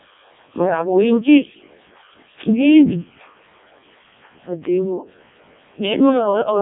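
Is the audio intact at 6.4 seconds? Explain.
No, at 6.4 seconds you're still hearing the Codec 2 vocoder that runs through the whole clip. It sends only pitch, voicing, energy and a rough spectral envelope, then rebuilds speech from sine waves. So it's robotic and buzzy, nothing above 3.7 kHz, consistent with its lowest bitrate, around 0.7 kbit/s.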